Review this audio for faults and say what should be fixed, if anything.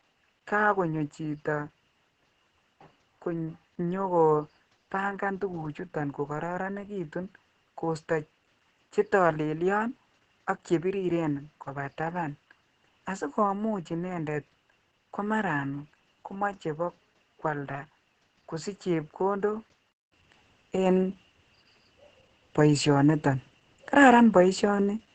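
Opus voice compression runs through the whole speech clip. The coder leaves the voice muffled, hoarse and faintly robotic, with a coarse, grainy texture, and nothing survives above 14 kHz. The damage is heavy enough to fit SILK at roughly 10 kbps in 20 ms frames. On a spectrogram, harmonics look smeared and blotchy, with a hard ceiling at 14 kHz. Encoding at a higher bitrate, or sending uncompressed audio, would prevent this.

From 0.0 s to 20.12 s the sound is duller and boxier, with nothing above 7.7 kHz. It is also around 10 dB quieter and carries a faint added noise floor, far below the speech. A gap of about 200 ms at 20.12 s, followed by brighter, louder sound, points to the likely cause: the input switched to a poorer device and then back. A spectrogram shows the lower band edge and a silent gap, and the waveform steps up in level. Locking the recording to one fixed input device would prevent it.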